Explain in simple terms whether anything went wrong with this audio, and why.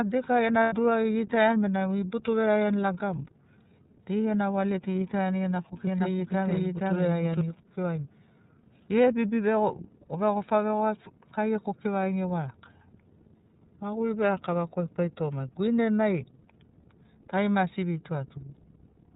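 The whole recording went through the iLBC codec, a phone-call codec that keeps only the lower part of the sound. Nothing above 4 kHz survives, so the speech sounds narrow, slightly rough and a bit synthetic. The damage is plainly audible.

Right after "tu deika gena", at 0.63 s, there are lost iLBC frames. For about 90 ms the decoder fills the hole by repeating a short slice of the voice mixed with noise. It sounds like a brief buzzy held vowel, then the speech recovers immediately.

From 5.87 s to 7.41 s there is a doubled audio track. A second copy of the speech, just as loud, runs about half a second behind. It starts and stops suddenly, with no room echo. It likely comes from an edit that left two copies out of step.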